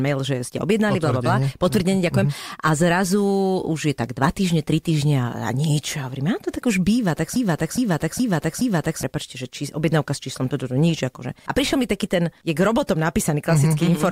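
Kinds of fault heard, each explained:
Broken-record loop: from 7.36 to 9.03 s, after "tak už býva tak", a 0.42 s fragment repeats exactly four times, likely because the stream stalled and kept resending its last buffered piece. The speech due there is lost before "že či objednávka s".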